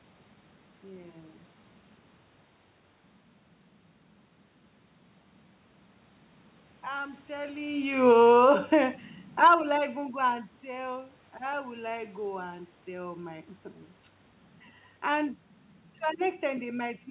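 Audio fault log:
7.94–10.56 s automatic gain falling: the gain control eases its level down by about 5 dB over roughly 2.6 s, so the voice and the room noise sink together. That shared drop separates it from the talker's movement just before, near 7.5 s. On the waveform, the envelope and the noise floor between phrases taper smoothly. On the spectrogram, the whole band up to the 4 kHz call-codec ceiling dims evenly.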